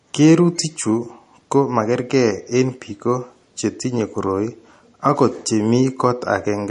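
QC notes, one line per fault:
Throughout, MP3 compression. Nothing is heard above about 10.6 kHz, so the speech is dull and the s sounds lose their bite. The damage is plainly audible. Faint detail warbles and swirls with a watery quality. This likely comes from a low-bitrate MP3 encode, fitting roughly 40 kbps. Short of bits, the encoder cut the treble at a fixed point. It dropped weak frequency lines, and these flicker on and off between frames.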